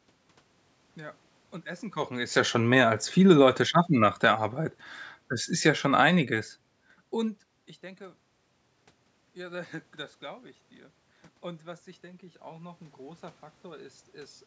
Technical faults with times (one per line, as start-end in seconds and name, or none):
3.15-4.82 automatic gain falling
11.42-14.42 automatic gain rising